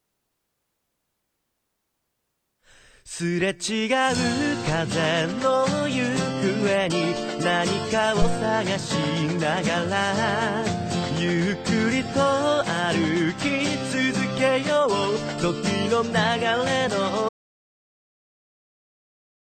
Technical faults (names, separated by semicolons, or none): audio dropout to silence